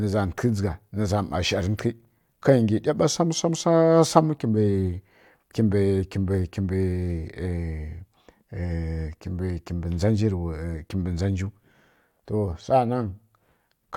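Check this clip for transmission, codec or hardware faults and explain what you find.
Listening through the speech, I hear nothing that points to a transmission, codec or hardware fault; the signal holds steady throughout.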